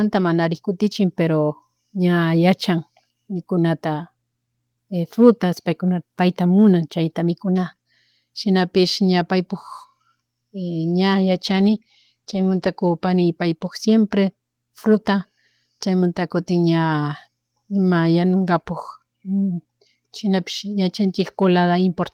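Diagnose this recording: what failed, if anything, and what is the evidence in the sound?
From 11.48 to 13.77 s the speech turns coarse and rough, a call bitrate drop: the codec's allocation sounds cut from 32 to 15 kbps.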